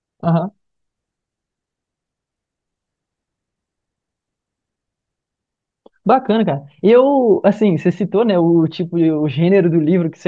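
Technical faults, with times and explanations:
No technical faults can be heard anywhere in this recording.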